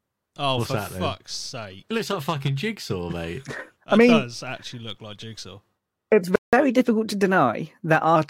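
At 6.36 s the speech cuts out mid-flow and stays silent for about 0.17 s, resuming at 6.53 s. This is a playback stall, likely caused by the player running short of buffered data or its output thread being blocked, so nothing reached the output until it recovered.

From 6.53 s to 8.16 s the speech runs fast and sounds raised, about one and a half semitones sharp, before settling back. This is catch-up at higher speed: the player resamples its backlog at 1.1 times normal rate to recover the time lost in the stall, which lifts speed and pitch together.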